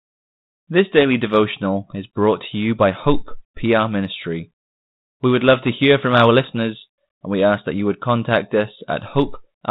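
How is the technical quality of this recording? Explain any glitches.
No glitches to report: the speech runs over a G.726 ADPCM path at 32 kbit/s, limited to the telephone band below 4 kHz, with only the light coding texture expected at that rate.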